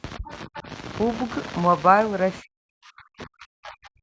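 Right at the start, from 0.17 to 0.68 s, the speech dips in and out, losing around 25 dB at its worst over about a third of a second in total. That's speech suppressed in double talk, likely the echo canceller ducking everything because both ends were talking at once. Inside that stretch, at 0.26 to 0.31 s and 0.55 to 0.59 s, you catch brief scraps of the other side's voice leaking through, roughly 20 dB under the talker. That's most likely echo the canceller didn't fully remove. The suppression comes back harder from 2.41 s through to the end, with the voice pushed down by as much as about 40 dB across roughly a second and a half, so it fades and chops away almost entirely. The call's microphone processing is there too, with nothing above 8 kHz, but that's normal.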